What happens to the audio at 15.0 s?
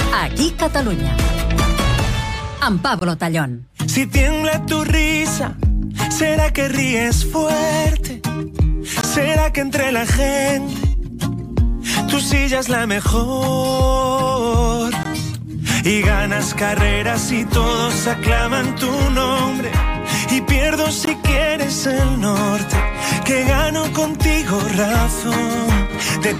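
At 15.03 to 15.05 s there is a gap between chunks: a 20 ms stretch of silence inserted at the join between 6.0-second blocks of audio. Nothing is dropped, but playback stalls briefly, heard as a short hole in the sound.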